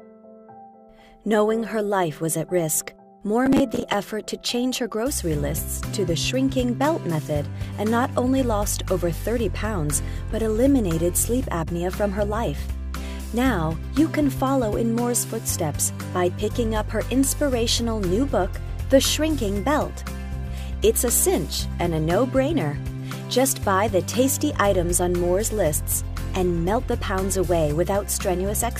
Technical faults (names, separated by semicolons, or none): processor overload crackle